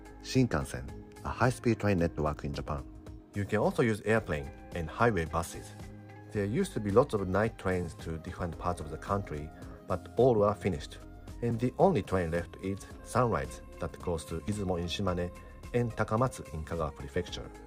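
At 2.58, 5.55, 11.51 and 14.48 s the sound skips briefly; this is likely audio missing between chunks, about 20 ms lost at 3-second boundaries, seen as waveform jumps and thin spectrogram seams.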